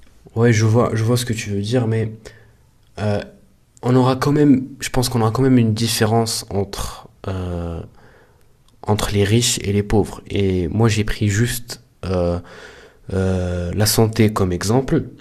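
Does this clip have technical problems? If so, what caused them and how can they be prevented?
No, no technical faults here.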